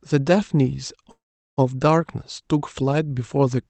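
A speech recording with a call audio freeze from 1.11 to 1.59 s: the last sound smears into a brief buzz that fades to silence for about 400 ms, then the speech picks up exactly where it stopped. The likely cause is delayed packets draining the jitter buffer. Unlike a dropout, nothing is cut out; the roughly half-second stall is inserted, pushing everything after it later. The call codec's coding texture and a top end ending near 8 kHz fit Opus at around 32 kbps.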